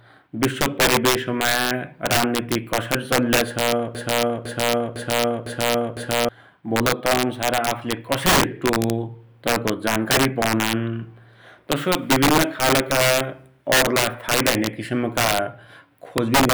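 A speech recording where the loudest moments break into harsh, violent cracks all the way through, far sharper and more splintered than ordinary clipping. This is integer overflow: the signal was pushed about 9 dB beyond full scale, and instead of being held at the limit, each peak that crossed it wrapped around to the opposite extreme of the number range. Only a small share of samples, around 2%, go over, so the damage lands in bursts on the loudest sounds. From 3.95 s to 6.29 s there is a broken-record loop: a 0.50 s fragment plays five times back to back, exactly identical each time, and whatever should have been heard during those seconds is missing. The likely cause is a stalled player, encoder or stream that kept re-sending the last piece of audio it held until fresh data arrived.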